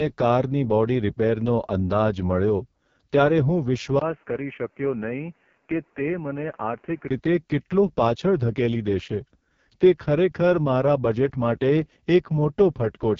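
From start to finish, AMR wideband (HD Voice) coding leaves the speech rough and raspy, consistent with 6.6 kbit/s, yet bandwidth reaches 7.3 kHz, unlike narrowband telephone audio.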